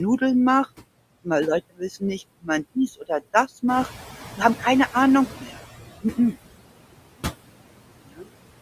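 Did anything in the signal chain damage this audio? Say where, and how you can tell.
Yes, the noise suppressor in call processing. Noise suppressor artifacts run throughout: background pulled down about 20 dB, with leftover noise pumping between words.

Speech cut by the noise suppressor at 1.7–1.82 s (about 21 dB), 5.41–5.58 s (about 9 dB), 6.03–6.35 s (about 11 dB), and 8.04–8.27 s (about 22 dB). Quiet bits get mistaken for noise and swallowed.

The noise suppressor is catching up after the room noise jumps about 10 dB near 3.5 s. From 3.68 to 5.68 s the noise leaks through, then sinks about 16 dB as the estimate adapts over 2 s.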